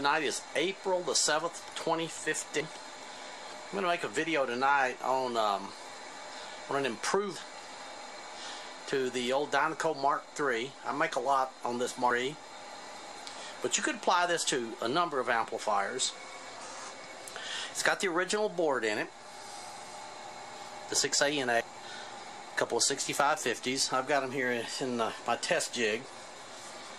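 At 7.36, 12.11, 21.61 and 26.36 s the sound skips forward abruptly, losing roughly a third of a second each time. The two sides are butted together with no gap. This is audio missing between chunks, likely from a recorder or processor that drops material while closing one block and opening the next. The skips fall about 4.75 s apart, or twice that between 12.11 and 21.61 s, which fits 5-second chunks.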